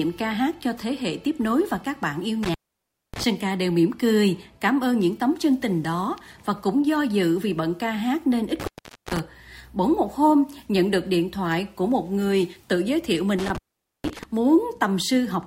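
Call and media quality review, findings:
Intermittent contact, three dropouts: 2.43–3.24 s (line open about 0.59 s), 8.60–9.19 s (about 0.45 s), 13.39–14.23 s (about 0.47 s). Audio cuts out with crackle at onset and recovery, faint hiss during the gap. Probable component: loose cable or plug in the analogue path. Mechanism: the contact briefly opens, the signal drops, and the make/break scrapes produce the edge crackle. Check and reseat connectors.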